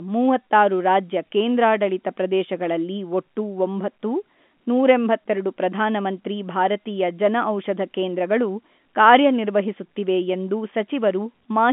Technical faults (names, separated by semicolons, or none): none